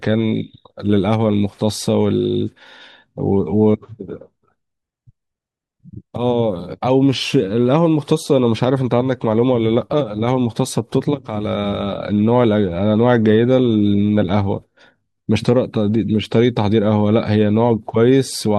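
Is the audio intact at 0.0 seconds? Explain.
Yes, the speech at 0.0 seconds plays cleanly, with no dropout, click, distortion or other fault at that moment.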